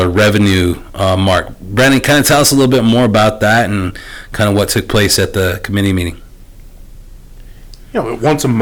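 It's a speech clip with hard clipping all the way through: driven about 15 dB too hot, so roughly 7 percent of samples hit the ceiling, giving harsh fuzz on every loud syllable.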